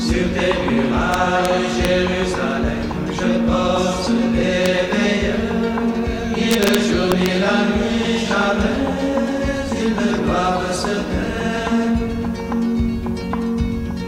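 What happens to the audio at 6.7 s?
At 6.7 s the audio is near the end of an integer overflow running from 6.51 to 6.75 s. Peaks driven about 1 dB past full scale wrap around to the opposite sign instead of being limited, producing sharp, violent cracks far harsher than ordinary clipping.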